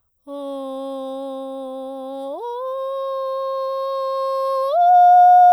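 No technical faults can be heard anywhere in this music clip. The audio runs without any audible interruption or disturbance.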